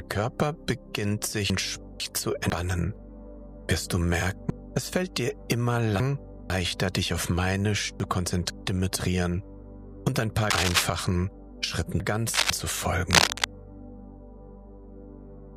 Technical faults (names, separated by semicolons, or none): chunks out of order; cable scratch noise